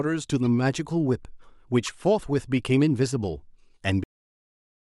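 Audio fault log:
0.41–0.46 s and 1.86–1.88 s, corrupt frame decoded: In each spot, damaged bits in a compressed frame were decoded and played anyway, so misread codes and gains placed energy at frequencies that don't belong to the speech. Each burst spans roughly a couple of frames and is heard as a brief chirp, blip or burst of noise. The first is faint, peaking at about -35 dBFS, and the second is much more prominent at about -20 dBFS.
4.04 s, cut-off end: The speech stops abruptly mid-sound at 4.04 s, and the remaining audio to the end of the clip is digital silence. The final buffers never reached the output, so nothing was written after that point. There is no natural decay or tail, just an instant drop from active sound to nothing, which is why the ending sounds chopped rather than finished.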